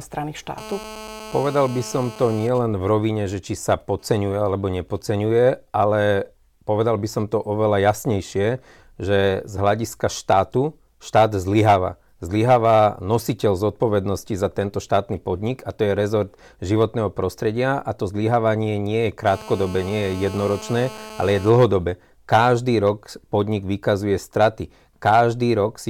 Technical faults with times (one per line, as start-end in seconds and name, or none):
0.58-2.47 GSM phone buzz
2.49-5.01 GSM signalling bursts
19.27-21.50 GSM phone buzz